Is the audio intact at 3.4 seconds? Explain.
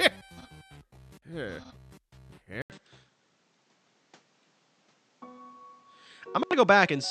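No. At 2.62 s the input likely switched to a poorer device. After an 80 ms gap nothing above 8.4 kHz passes, so the sound stays dull, about 5 dB different in level, with faint new noise.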